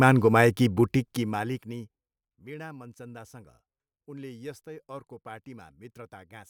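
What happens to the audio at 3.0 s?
Nothing goes wrong at 3.0 s: the speech there is intact, with no dropout, click or distortion.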